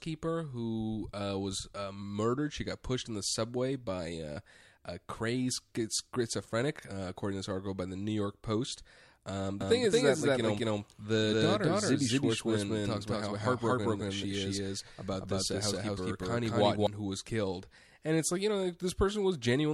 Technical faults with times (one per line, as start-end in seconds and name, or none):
9.61-16.87 doubled audio track